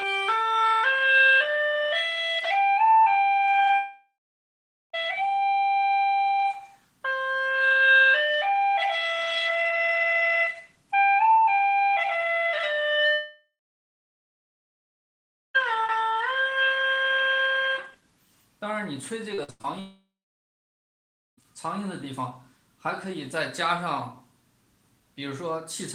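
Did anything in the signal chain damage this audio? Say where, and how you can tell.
Yes, the damage sits in the network stage, in two forms.

Three long network dropouts occur at 3.75 to 4.95 s, 13.13 to 15.56 s and 19.80 to 21.39 s, removing about 1.2 s, 2.4 s and 1.6 s of audio. Each begins with the last sound stretched into a fading buzz, then gives way to silence lasting roughly 0.8 s, 2 s and 1.3 s. The cause is likely a stall in packet delivery that the receiver's concealment could only bridge briefly. A spectrogram shows smeared, flat bands decaying into an empty column. The waveform tapers to a flat line.

Repeated packet loss (robotic sound) runs from 19.34 to 19.66 s, just before the third dropout. Four gaps, the longest 95 ms, drop about 200 ms of audio, and concealment covers 62% of that span. The result is choppy sound with pieces missing. On a spectrogram this appears as alternating blocks of copied, frozen spectra and real content. 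The waveform shows short repeated segments spliced against fresh ones.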